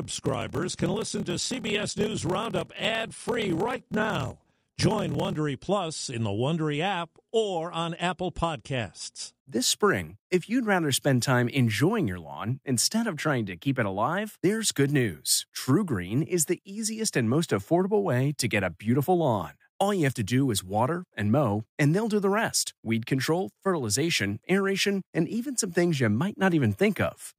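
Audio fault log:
0.00–5.37 s, block size mismatch (padded): one stage writes shorter blocks than the next reads, which fits 1024-sample writes, and zeros fill each remainder. The recurring gaps make a 38.3 Hz buzz, and the speech runs slow, at 0.889 times speed.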